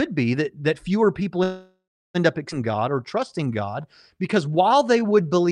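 At 1.43 s, right after "that that fewer people", the speech stops and a call audio freeze begins. It lasts until 2.17 s. The last sound is carried on as a fading buzz or hiss, and about 330 ms of that stretch ends in silence. The most likely cause is packets held up in transit, so the jitter buffer ran dry. When audio resumes, it picks up where it left off. Nothing is lost, but 712 ms of delay has been added.

At 2.51 to 2.53 s there is a skip ahead. Playback jumps forward with almost no gap, only a 6 ms join. Roughly 0.4 s of speech is gone. The two sides meet nearly directly, so the cut sounds abrupt. The receiver dropped a block of audio while later audio was already waiting. This takes back about 400 ms of the delay the freeze built up.

From 2.72 s to 5.47 s a jitter buffer slow-down runs to near the end. The buffer was short of reserve, so the receiver repeated single pitch periods and bits of pauses, over and over. 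That adds 254 ms. The speech plays at 91 percent speed with the pitch unchanged. Sounds are drawn out, and a slight warble can come through.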